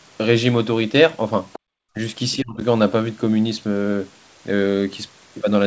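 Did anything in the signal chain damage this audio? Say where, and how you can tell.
Yes, at the call-processing stage, in the echo canceller. The other side's voice is leaking through at 1.53–1.59 s and 2.32–2.36 s as faint scraps roughly 20 to 25 dB below the talker. The likely cause is loudspeaker playback that the canceller's adaptive filter failed to subtract fully.

The background is gated by the echo canceller from 1.59 to 1.65 s. Right after the first leak, the room sound drops by about 39 dB for around 70 ms, then returns. The suppressor clamped the microphone while the far end was active, then released.

Speech is suppressed in double talk at 1.93–1.98 s, dipping about 20 dB for roughly 50 ms, and again at 2.36–2.6 s, dipping about 25 dB for around 200 ms just after the second leak. With both sides active, the canceller likely mistook the talker's speech for echo and attenuated it.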